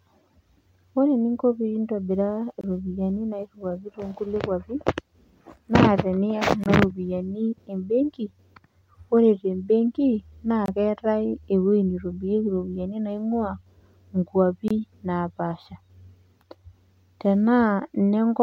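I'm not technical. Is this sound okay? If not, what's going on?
No. There's a gap between chunks: the speech was delivered in 4-second pieces, with about 23 ms of silence left at each join. You hear brief, sharp dropouts at 2.61–2.64 s (just before "iropiani nairiwuaki to"), 6.64–6.66 s (before "ropiani embenki"), 10.66–10.68 s (after "te mbenki naa") and 14.68–14.71 s.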